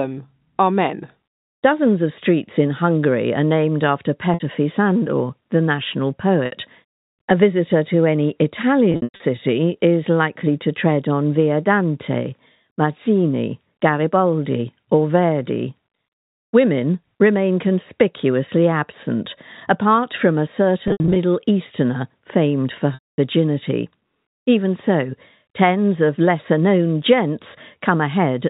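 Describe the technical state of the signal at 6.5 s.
At 6.46 to 6.52 s, right after "the national", there is packet loss with pitch repetition. About 60 ms of audio is missing, which fits three lost 20 ms packets. The receiver bridges the gap by looping the last pitch period, heard as a brief held, buzzy tone that fades toward silence over roughly 50 ms before the speech resumes through a short cross-fade. The band-limited G.711 telephone sound carries through the event.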